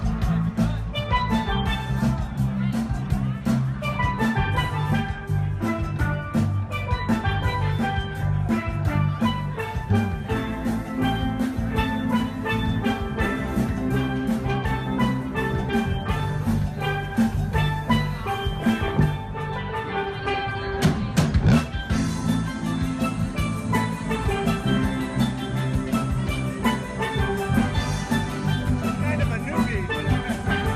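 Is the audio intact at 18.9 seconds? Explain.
No. Between 18.53 and 18.97 s there is DAB burbling: bit errors from weak reception, at an error rate somewhere under half a percent, slipped past error correction into the MP2 data, corrupting samples and scale factors so individual sub-bands jump in level frame by frame. The result is short blips of noise in single sub-bands over the programme.

Underneath, the whole passage also has the dull tone and gurgling, granular grain of MP2 compression. That likely comes from too few bits for each band, which fits a rate of about 80 kbps, so the upper bands flicker off and the remaining bands sound coarse.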